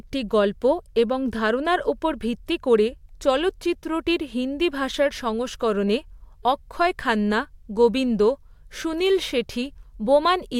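No technical faults can be heard in this speech recording. There is nothing in it to place on a timeline or trace back to a cause.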